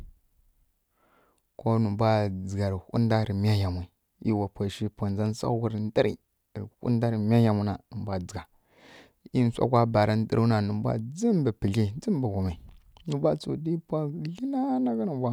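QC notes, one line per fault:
Nothing to flag here, the speech comes across without any technical faults worth noting.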